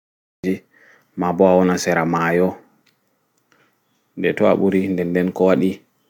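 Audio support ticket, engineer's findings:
Cut-off start: capture began late. Digital silence 0.00–0.44 s, then speech enters abruptly at 0.44 s mid-sound. No natural attack or fade-in; opening syllable truncated. Probable cause: recorder or stream start lagging the talker, not an edit.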